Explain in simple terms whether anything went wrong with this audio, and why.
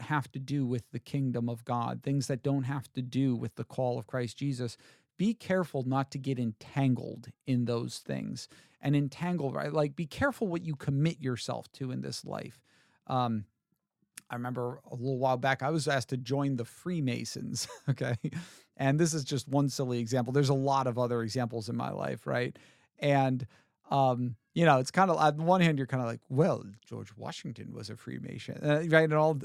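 Nothing went wrong anywhere in this speech recording.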